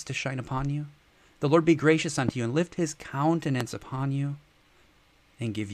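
A loud pop at 2.29–2.31 s and again at 3.61–3.63 s, each a sharp transient roughly 15 dB above the signal, likely a voltage pulse from a switch or static discharge.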